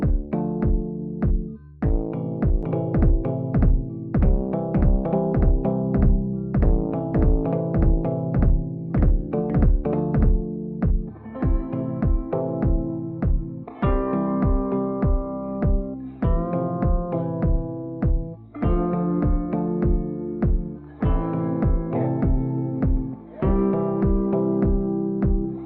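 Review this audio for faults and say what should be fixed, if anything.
From 2.63 s to 10.43 s the audio has a doubled audio track: a second full-band copy trails the original by about half a second at roughly equal loudness, with no decay or room colour, and it cuts in and out abruptly at both ends. On a waveform and spectrogram, every event appears twice, the same pattern repeated about half a second later. The likely cause is a duplicate capture path or misaligned edit. Preventing it means monitoring only one input route and checking edits for overlapping copies.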